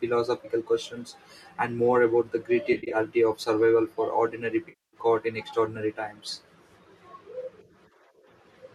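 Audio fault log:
2.73–2.97 s, AAC frame loss with concealment: after "and more about the", 140 ms of frames vanish, scattered across 200 ms in short runs of about 50 ms at most. The decoder rebuilds each gap from the last good spectrum, giving a smeared, noisy flutter.
4.69–4.97 s, AAC frame loss with concealment: after "of survival for ordinary", 240 ms of frames vanish. The repeated spectrum with randomised detail sounds phasey until real frames resume before "in extraordinary times".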